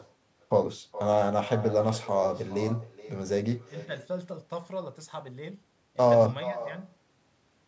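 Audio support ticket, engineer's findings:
Echo with no canceller, throughout: each phrase repeated roughly 0.4 s later at about 15 dB down, thinner. Far-end loudspeaker feeding its mic, no AEC removing it. Waveform shows faint delayed copy of every burst; spectrogram shows ghosted harmonics trailing, band-limited below 8 kHz.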